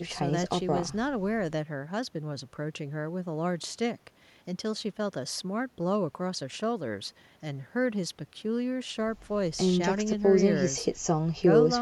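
Nothing goes wrong anywhere in this bit of speech, so there's no technical fault to point out.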